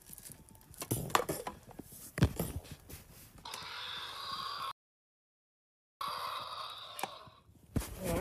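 At 4.71 s the sound drops abruptly into silence and stays silent until 6.01 s, then picks up exactly where it broke off, with nothing skipped or repeated. That gap is a rebuffering stall: playback exhausted the audio it had already downloaded and simply halted until more data arrived. Because no material is discarded, the pause adds about 1.3 s to the running time rather than removing anything.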